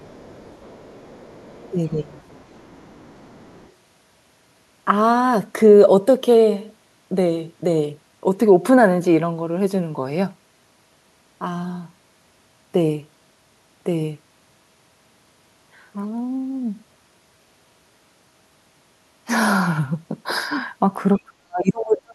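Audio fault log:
0.0–1.7 s: other side's voice leaking through. A faint second voice sits about 30 dB under the speech. It is likely residual loudspeaker echo that the echo canceller left in the microphone signal. On a spectrogram it shows as a weak, separate set of harmonics beneath the main talker's bands.
1.68–2.16 s: speech suppressed in double talk. With both sides active, the talker's level drops by up to about 15 dB over a little under half a second. The likely cause is the canceller turning everything down when it could not tell its own talker from the echo. The waveform envelope pinches in.
2.14–3.7 s: other side's voice leaking through. The echo returns slightly weaker, about 35 dB below the speech. It likely comes from the same incomplete cancellation. It appears as faint, ghostly harmonic traces that are not aligned with the main voice.
21.17–22.14 s: speech suppressed in double talk. 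Here the talker is cut hard, by up to about 40 dB, for roughly a second. That is likely heavy suppression during simultaneous talk. The waveform collapses to near silence, and the spectrogram goes almost blank across the band.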